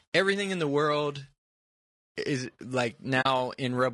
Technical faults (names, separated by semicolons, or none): low-delay AAC compression; AAC frame loss with muting